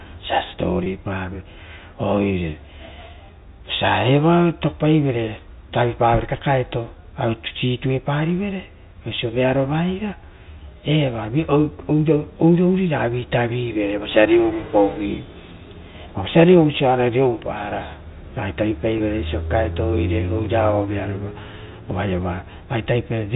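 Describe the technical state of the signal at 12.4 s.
At 12.4 s the speech is intact, with no fault at that point beyond the ordinary telephone-band character of G.711 coding, which cuts everything above 4 kHz.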